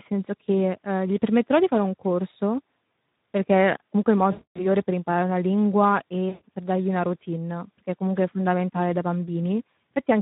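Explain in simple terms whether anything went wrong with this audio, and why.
Two things went wrong. Throughout the clip, the speech carries damage from the Speex codec, an older compression method used for internet calls and game chat. Squeezed hard to save data, it keeps the rough outline of the voice but loses fine detail, so everything sounds grainy and hoarse. Unlike a brief glitch, this roughness never lets up. It is present from start to finish, and the upper part of the sound is a hissy imitation rather than real detail.

The second problem is VoIP packet loss concealed by the speech codec, at about 4.31 to 4.66 s and again at 6.29 to 6.42 s. Pieces of the call went missing, and the decoder filled each gap by stretching out the last bit of voice it had. That patch turns into a buzzy tone or a coloured noise that fades. It differs from a plain dropout because there is no silence or click. 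The sound smears and weakens, then stays weak or distorted for a moment after the speech returns.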